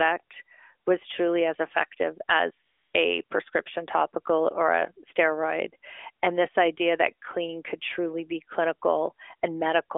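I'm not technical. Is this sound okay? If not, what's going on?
No. Twice, the phone decided nobody was talking and stopped sending speech, so the receiver filled in fake background hiss. This AMR comfort noise replaces the real background with a smooth, steady noise from 2.66 to 2.94 s and again from 3.24 to 3.30 s, heard through the narrow, phone-like sound of the call.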